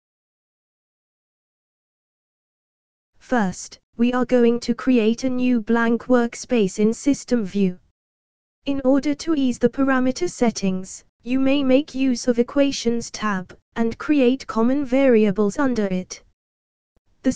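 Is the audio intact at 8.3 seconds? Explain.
Yes, the audio at 8.3 seconds is intact, with no dropout, click, distortion or other fault at that moment.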